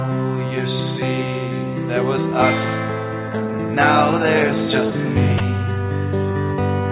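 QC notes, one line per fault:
5.38 s, sound dropped by the voice detector: for a single 20 ms moment the sound gives way to a short patch of steady, featureless noise, then returns intact. The likely cause is the sender's voice detector briefly treating the signal as background and pausing transmission while the receiver filled in comfort noise. Unlike a packet-loss gap or glitch, there is no click, hard silence or smeared repeat, only soft noise. It keeps the same 4 kHz ceiling as the surrounding audio, consistent with a G.711 mu-law call path.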